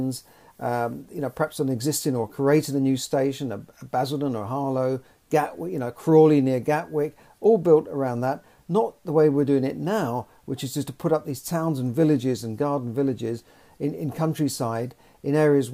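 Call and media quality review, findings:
No faults found on review; no dropouts, distortion or timing problems heard across the recording.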